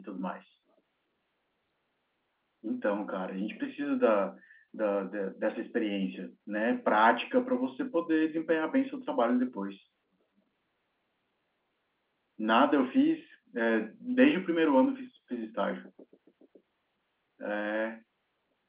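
Speech over an A-law telephone line, with no faults.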